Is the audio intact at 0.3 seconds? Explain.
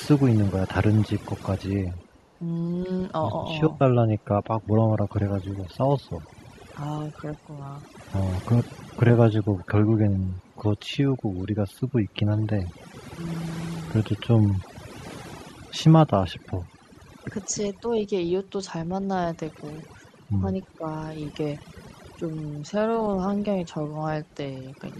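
No. At 0.3 seconds the speech is already affected by overdone noise removal, which runs through the whole clip. A noise reducer set far too aggressively is pulling individual frequency bands down whenever they sit near its noise estimate. Quiet parts of the voice vanish with the noise. The background drops and breaks up into twinkling specks. On a spectrogram, the floor shows as dark gaps with scattered isolated dots. The harmonics look ragged and patchy.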